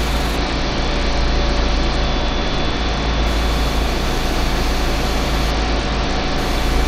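At 0.36–3.26 s and 5.50–6.38 s, a Bluetooth SBC bit pool drop starves the upper bands of bits, leaving dull, gritty treble that fits a bit pool of about 9.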